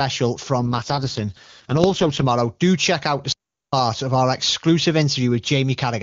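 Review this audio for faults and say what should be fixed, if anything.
From 0.60 to 2.25 s, just before "do check out the", the speech turns rough and synthetic with no gap or band loss: an AMR rate drop, fitting a switch from 23.85 to 6.6 kbit/s.

From 3.33 to 3.73 s, between "do check out the" and "of our exclusive", the sound cuts to dead silence for about 0.4 s. This audio dropout to silence is likely from lost input while zeros were written.

Prevention: keep the radio link strong enough to hold the top AMR-WB rate, and secure the input connection so the signal cannot drop mid-recording.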